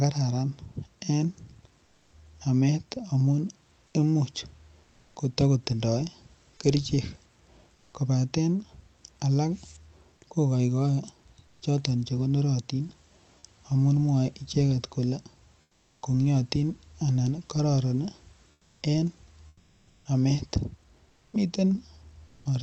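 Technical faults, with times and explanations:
1.85–2.13 s, 7.75–7.93 s, 11.47–11.61 s, 15.61–16.01 s, 18.51–18.81 s, 21.09–21.33 s, 22.27–22.45 s, comfort noise in place of the background: likely Opus discontinuous transmission halts sending in pauses, so the real background becomes flat synthetic noise, mostly about 2 to 9 dB quieter.
19.47–20.05 s, sound dropped by the voice detector: the detector likely mistook speech for background and stopped sending, so about 310 ms of speech vanishes.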